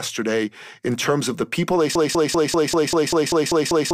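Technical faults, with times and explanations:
1.95–3.93 s, broken-record loop: from 1.95 s to the end of the clip, a single 195 ms fragment of the speech repeats exactly, back to back, about ten times, giving a rapid stutter instead of continuing speech. The identical repeats point to a player, encoder or stream that likely stalled and kept outputting the last buffer it held, so whatever speech should have followed is missing.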